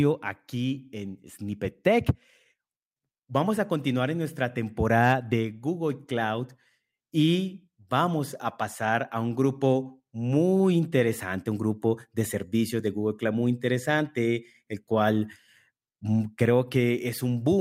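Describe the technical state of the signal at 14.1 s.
At 14.1 s the speech signal is intact, with no audible technical fault at that moment.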